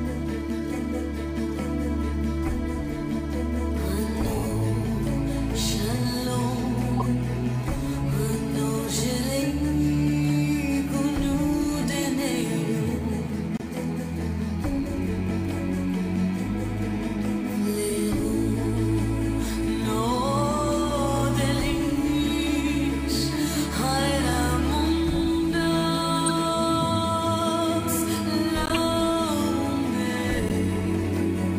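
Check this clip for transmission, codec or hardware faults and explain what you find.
A transmission fault is present: corrupt frames decoded at five points, at 6.97–7.02 s, 13.57–13.62 s, 26.26–26.31 s, 28.66–28.72 s and 30.47–30.52 s. Flipped bits in a few compressed frames made the decoder rebuild energy at wrong frequencies, giving 45–60 ms chirpy bursts peaking around -15 dBFS, the last two louder near -10 dBFS. Unlike a dropout or click, the audio doesn't simply spike; it briefly turns into misplaced noise.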